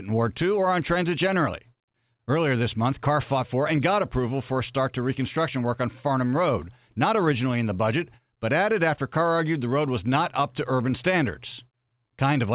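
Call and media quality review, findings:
No faults found; narrowband speech over mu-law G.711.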